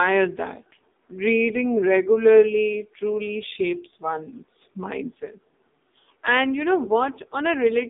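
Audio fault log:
Throughout, AMR narrowband mobile codec: speech is confined to 200 Hz to 3.7 kHz and sounds heavily buzzy and synthetic, which fits a low-rate 5.9 kbps mode rather than simple band-limiting.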